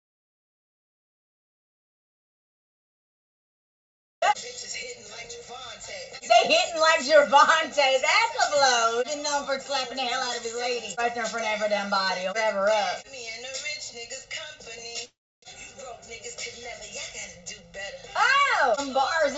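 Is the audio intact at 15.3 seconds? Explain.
No. From 15.05 to 15.45 s a call audio freeze is underway. Packets were likely held up in transit, so the jitter buffer ran dry. The receiver first stretches the last sound into a short fading buzz, then for about 300 ms there is only silence, roughly 375 ms of filled time in all. When the audio resumes it picks up exactly where it stopped, with nothing lost, but everything after arrives about 375 ms later than before.

Channel delay (comb filtering) also affects this moment, as it does the whole clip. One channel lags the other by roughly a millisecond and a half, and when the two are summed to mono, the shared content cancels at evenly spaced frequencies, the first falling near 300 Hz. Those fixed notches give the sound a hollow, phasey colour.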